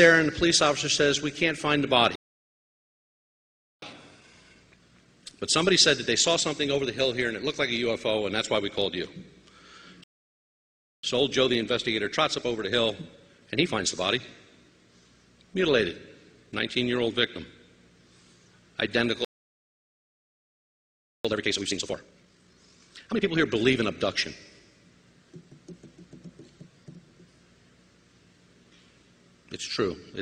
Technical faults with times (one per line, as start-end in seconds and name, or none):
2.15-3.82 playback stall
3.82-6.82 time-compressed catch-up
10.04-11.03 playback stall
11.03-14.03 time-compressed catch-up
19.25-21.25 playback stall
21.25-23.25 time-compressed catch-up